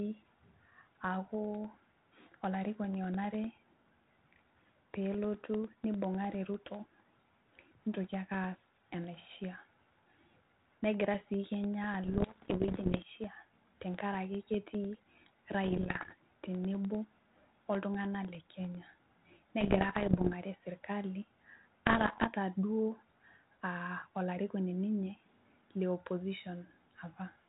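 A speech recording carries two faults. From 0.14 to 19.15 s, periodic USB or driver dropouts occur: a background task stalls the audio path every 0.1 s, and each time roughly a millisecond of signal is replaced by silence, so the speech carries a steady ten-per-second ticking that lasts around two hundred cycles and is audible only while sound is present. Bit errors on an ADPCM link appear in four bursts, at 12.04 to 13.03 s, 15.64 to 16.13 s, 19.61 to 20.34 s and 21.86 to 22.27 s. Flipped bits corrupt the decoder's step size and prediction, so each error rings on briefly and is heard as pops, rough gritty patches and momentary jumps in level. The density points to an error rate of around 1.5 to 2 percent. The narrowband G.726 coding underneath, consistent with 32 kbit/s operation, leaves only light damage of its own.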